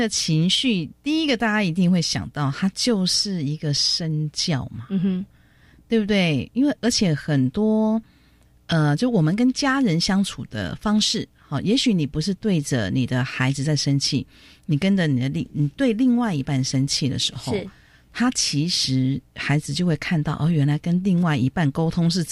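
No technical faults can be heard anywhere in the audio.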